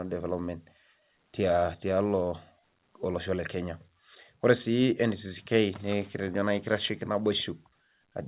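Speech over a WebRTC call path, with nothing above 4 kHz, consistent with a G.711 A-law narrowband codec; no technical fault present.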